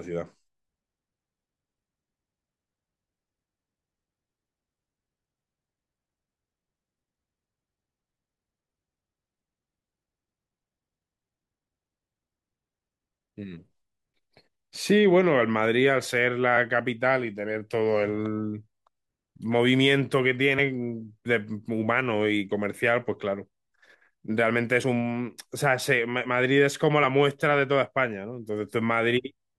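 At 20.58 s and 24.83 s the speech jumps ahead about 50 ms with a brief smeared blip. These are compressed frames skipped, consistent with two 23.2 ms frames that were missing or rejected as damaged.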